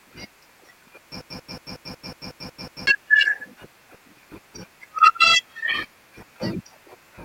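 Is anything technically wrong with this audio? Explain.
Yes. From 1.21 to 2.87 s the speech falls into a broken-record loop: a 0.18 s fragment repeats identically nine times, likely a stalled stream resending its last buffer. Exact, gapless repeats distinguish it from echo.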